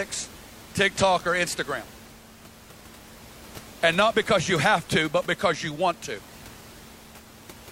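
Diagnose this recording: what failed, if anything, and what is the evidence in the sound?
Nothing in the chain failed: the speech sits about 22 dB above a room noise that belongs to the recording itself, with no sign of a fault at any stage.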